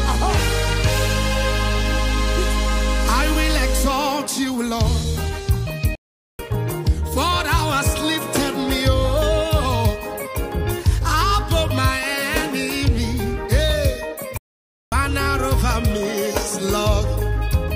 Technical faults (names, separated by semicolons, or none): playback stall